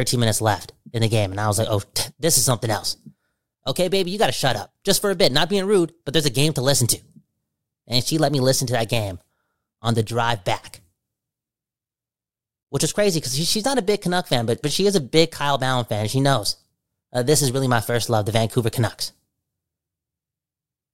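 At 2.51 s a single loud pop, about 20 ms long, cuts through the speech, standing roughly ten decibels above it while the talking carries on underneath. It is most likely an electrical transient, such as a plug, switch or static discharge, pushing a sudden pulse into the signal path. On the waveform it appears as a lone spike towering over the surrounding speech; on a spectrogram it shows as a thin vertical stripe spanning all frequencies.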